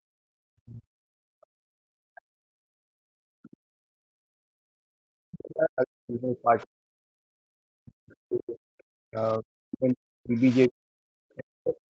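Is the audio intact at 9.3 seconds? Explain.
No. Speech suppressed in double talk, likely from an echo canceller that couldn't separate talker from loudspeaker echo, ducks the speech from 4.95 to 11.9 s, at its deepest by around 40 dB. Within that stretch, from 9.24 to 9.38 s, the other side's voice leaks through, likely because the echo canceller left residual loudspeaker sound in the microphone signal. It is a faint scrap far below the speech.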